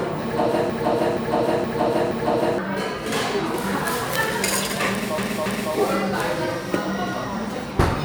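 A broken-record loop runs from 0.70 s to 2.58 s. The same 0.47 s fragment of sound repeats exactly, back to back, four times, with nothing new in between. This is likely a stall in the player, encoder or stream, which kept re-sending the last piece it held instead of moving on. Whatever audio belonged in those two seconds never arrives and is lost for good.

Repeated frames follow from 5.18 s to 5.74 s. A 0.28 s block of sound plays two extra times, so the passage stutters in place before continuing. The repeated length points to a short run of compressed frames that were written or sent more than once, which the decoder then faithfully played again. Unlike the earlier loop, nothing is lost here. The sound instead gets longer, by about 0.56 s.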